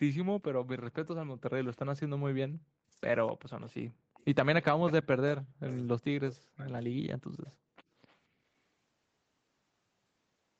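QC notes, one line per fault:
2.32–2.63 s and 7.0–7.42 s, background gated by the echo canceller: the room sound falls away by about 40 dB for roughly 0.3 s each time, then returns. The canceller clamped the microphone while loudspeaker audio was playing and released it afterwards.
2.91–4.18 s and 4.75–7.27 s, speech suppressed in double talk: the talker's speech dips by roughly 40 dB in pieces, about 0.3 s in total in the first span and 1.5 s in the second. The likely cause is the echo canceller attenuating everything because both sides were speaking at once.
3.28–4.91 s, 7.45–7.52 s and 8.08–8.16 s, echo leak: a copy of the speech arrives 256 ms late. It is roughly 25 dB below the direct speech in the first span and roughly 35 dB below in the two short scraps. This is likely loudspeaker pickup that the canceller failed to remove.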